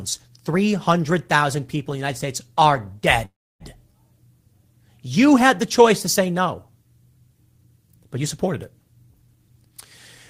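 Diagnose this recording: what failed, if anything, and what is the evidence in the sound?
At 3.25 s the speech stalls for about 0.35 s, running from 3.25 to 3.63 s. The last sound carries on briefly as a fading buzz, then goes quiet for roughly 290 ms before the talker picks up exactly where they left off. Nothing seems to be lost; the audio is just pushed about 348 ms later. That's a call audio freeze, likely at the network stage: packets stalled in transit, the jitter buffer drained, and the receiver papered over the wait.

From 9.06 to 9.69 s the speech runs hurried, about 110% of normal pace, with the pitch unchanged. That's a jitter buffer speed-up. The buffer had built up more delay than it wanted, probably from late packets landing in a bunch, so the receiver trimmed short pitch-period slices back to back, about 70 ms in all. Time compresses, the pitch doesn't move, and the end result is rushed speech.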